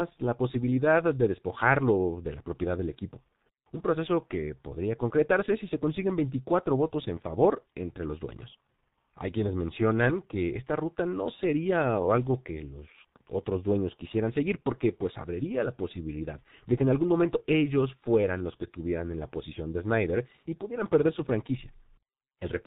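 Throughout, the speech carries heavy G.723.1 codec damage: coarse 30 ms frames at low bitrate leave it muffled and hoarse, and the spectrogram shows nothing above 4 kHz.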